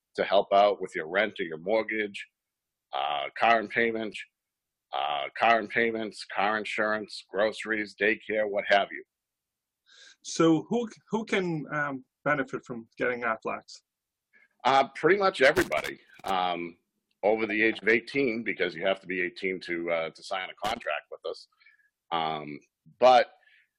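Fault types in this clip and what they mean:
Stream segment repeated: The player ended up fetching or queuing the same chunk twice, so a stretch of the programme plays through and then plays again. Here it happens between 4.12 and 6.12 s, where roughly two seconds of sound come around a second time, with a small blip at the point where it jumps back. Nothing's missing; the clip just runs about 2.0 s longer than it should.
Loose connector crackle: A worn or dirty contact somewhere in the chain is making and breaking as it shifts, chopping the signal and throwing in pops from any DC on the line. You get two irregular bursts of scratchy crackle, one from 15.55 to 16.30 s lasting about three quarters of a second, and a shorter flick from 20.64 to 20.84 s. They're uneven and scratchy rather than rhythmic, the way a moving bad contact tends to sound.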